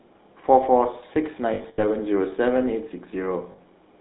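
Throughout, the speech carries GSM full-rate codec damage: a buzzy, gravelly roughness from pulse-excited vocal-tract modelling, consistent with 13 kbps coding, confined to a 200 Hz to 3.7 kHz line band. Lost GSM frames occur from 1.54 to 1.83 s and again from 3.52 to 3.59 s, where repeated last-good frames produce a rough, metallic ring.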